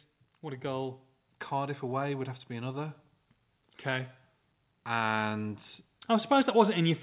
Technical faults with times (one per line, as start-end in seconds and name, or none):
0.41-3.01 automatic gain rising
4.86-7.02 automatic gain rising